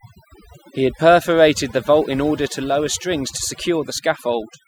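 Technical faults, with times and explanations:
Throughout: overdone noise removal. The noise reduction on this speech has been pushed too hard, so any frequency band sitting close to its noise estimate is pulled far down or switched off entirely. The quieter parts of the speech fall below that line and vanish with the noise. Between phrases the background drops, broken by twinkling specks where isolated bands flicker back on.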